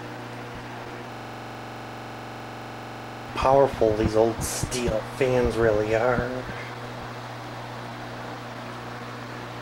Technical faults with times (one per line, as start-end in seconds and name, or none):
0.00-9.62 clock drift between sender and receiver
0.17-9.26 repeated timing corrections
1.12-3.28 system hang loop